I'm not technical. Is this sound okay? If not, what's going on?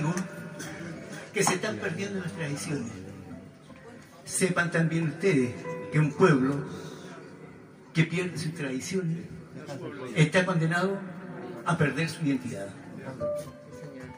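No, there's a low, steady buzz running under the whole clip, at about 47 times a second. That's a block size mismatch (truncated): one stage hands over chunks of audio, which fits 1024-sample blocks, and the end of each chunk gets chopped off, leaving a regular buzz.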